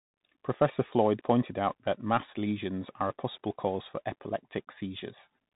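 From start to end, the speech carries Bluetooth CVSD headset codec damage, plainly audible: a one-bit delta coder with adaptive step size, consistent with a 64 kbps link. Nothing above 4 kHz survives, loud high sounds outrun the step and distort, s sounds turn scratchy, and granular hiss sits underneath.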